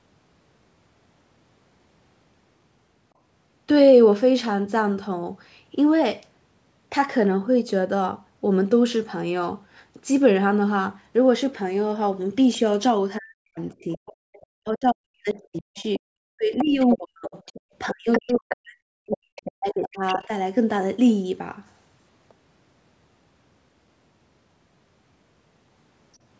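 Speech suppressed in double talk hits this speech recording three times, from 13.18 to 14.10 s, 14.52 to 17.35 s and 17.92 to 20.32 s. The talker's level repeatedly falls away, at its deepest by about 40 dB, for a total of well under a second in the first stretch and roughly two seconds in each of the others. The likely cause is an echo canceller that, with both ends talking at once, could not tell the near talker from the loudspeaker echo and turned everything down. The other side's voice leaking through overlaps those same stretches, at 13.92 to 14.46 s, 15.76 to 15.99 s, 16.58 to 16.95 s, 17.27 to 18.55 s and 19.11 to 20.18 s. A second voice sits about 25 dB under the talker at first, then rises to about 10 dB under and later about 15 dB under. It is likely far-end audio from the loudspeaker that the canceller failed to fully remove from the microphone. Throughout, the band tops out at 8 kHz, as expected from the call's microphone processing.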